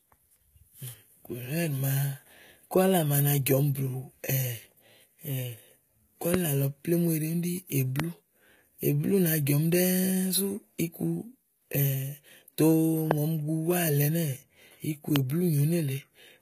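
The whole recording carries HE-AAC compression damage, likely from a HE-AAC v2 encode at a very low bitrate, around 20 kbps. The codec damage is plainly audible. Nothing sounds above 14.9 kHz. The upper band is rebuilt from lower bands, so sibilants turn gritty and metallic.

Four loud pops land on top of the speech, at 6.34–6.36, 8.00–8.02, 13.11–13.13 and 15.16–15.18 s. Each is a single sharp click. The first peaks about 15 dB above the signal, the rest about 20 dB. The likely cause is a voltage spike from a switch, static or a driver glitch. The speech carries on underneath.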